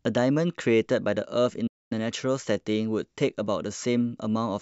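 It's a short speech recording with one clear playback stall: at 1.67 s the sound just stops dead mid-flow and stays silent until 1.92 s, a gap of about 238 ms, before it carries on. That kind of drop-out is what you get when the player runs dry; it's likely the playback buffer underran or the audio thread got blocked briefly, leaving the output with nothing to play.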